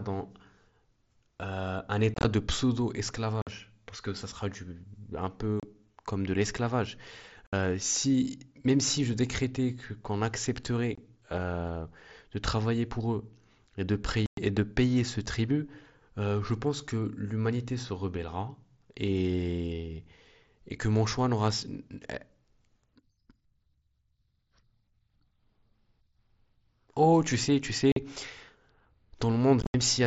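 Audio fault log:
2.14–29.74 s, unconcealed Bluetooth headset packet loss: gaps at 2.14–2.25, 3.42–3.47, 5.60–5.63, 7.47–7.53, 10.95–10.98, 14.26–14.38, 27.92–27.97 and 29.61–29.74 s. Each loses 22.5 to 112.5 ms, in steps that fit 7.5 ms mSBC packets. The headset link dropped those packets and nothing filled them. The speech cuts to silence or an idle pattern with hard, abrupt edges. At 2.14 s and 29.61 s the losses are scattered, so the speech sounds chopped and crackly.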